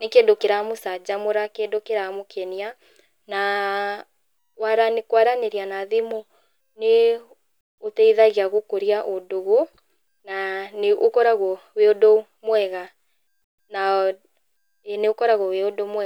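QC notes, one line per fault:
No faults found in this clip.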